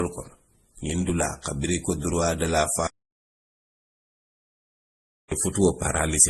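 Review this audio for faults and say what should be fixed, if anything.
Throughout, the speech carries layered coding smear with nothing above 12.2 kHz, likely transcoding between lossy codecs, consistent with MP3 then Opus at low bitrates. Stacked, mismatched artefacts distinguish it from single-codec damage. Prevent this by encoding once from the original source.

From 2.87 to 5.32 s, an audio dropout to silence removes about 2.4 s. The gap is silent with no room tone, unlike a fade or gate, likely from lost input. Prevent this by securing connections and monitoring input during recording.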